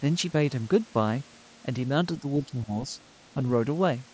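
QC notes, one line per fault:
2.2–2.71 s and 3.34–3.42 s, speech suppressed in double talk: the speech sinks by roughly 10 dB for part of the first stretch and dips more briefly, by about 5 dB, in the second. The likely cause is an echo canceller ducking the near talker while the far side spoke at the same time.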